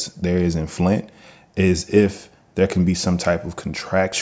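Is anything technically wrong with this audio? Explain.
No, the speech shows no technical faults; it carries the ordinary character of call microphone processing, with the lowest bass trimmed by its high-pass filter and nothing present above 8 kHz.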